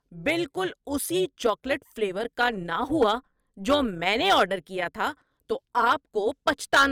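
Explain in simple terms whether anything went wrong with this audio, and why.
Something went wrong in how the audio was processed. The speech was chopped into many tiny overlapping slices and then glued back together, but the overlaps didn't line up to keep the volume steady. This fault is called overlap-add ripple. Because of it, the loudness dips and swells about 200 times a second from start to finish. To the ear, that makes the voice sound rough, buzzy and metallic, with extra tones hanging around the voice.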